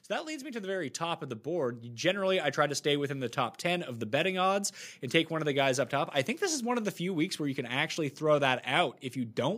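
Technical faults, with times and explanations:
0.07–3.98 s, automatic gain rising: the level climbs steadily by about 11 dB until just before "the betting odds and", as the gain control, judging the input too quiet, keeps turning itself up, so speech and background noise swell together over nearly four seconds.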